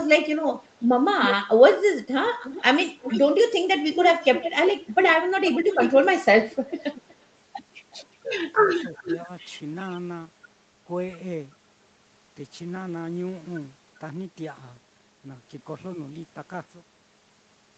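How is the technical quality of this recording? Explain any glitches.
The main trouble is echo leaking back into the call, plus one short dip where the talker gets squashed. The audio stops at about 8 kHz, which is what you'd expect from a call codec like Opus running in wideband mode.

Echo leak shows up at 0.50 to 0.68 s, 2.26 to 3.21 s, 3.74 to 7.15 s, 8.69 to 9.24 s and 9.79 to 9.97 s. It's most likely a speakerphone whose echo canceller didn't fully scrub what its mic picked up, so that residue got sent back. You hear a ghost copy of the speech lagging by roughly 340 to 375 ms, creeping later across the clip. It sits about 10 to 15 dB under the main speech, and the last one is a faint scrap about 35 dB down.

Speech suppressed in double talk hits between 9.03 and 9.28 s, overlapping that echo stretch. Both ends were likely talking at once, and the canceller couldn't tell the local talker from the loudspeaker echo, so it ducked everything. 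The result is brief dipping in the speech, totalling around 50 ms and dropping about 5 dB at most. It sounds like the speech momentarily dips or thins rather than fully cutting out.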